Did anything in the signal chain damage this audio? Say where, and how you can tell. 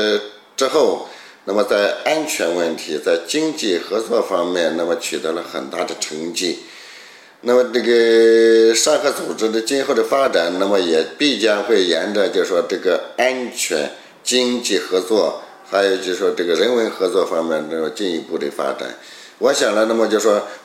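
No, nothing in the signal chain left an audible mark on this audio, and the signal reaches playback intact at every stage.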